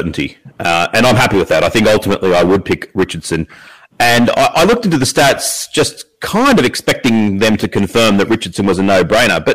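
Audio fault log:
Throughout: hard clipping. The speech is pushed about 19 dB past what the stage can pass, so a good share of the waveform, something like one sample in seven, gets sliced flat at the ceiling. Those squared-off peaks throw harmonics high up, giving every loud syllable a harsh, buzzy fuzz.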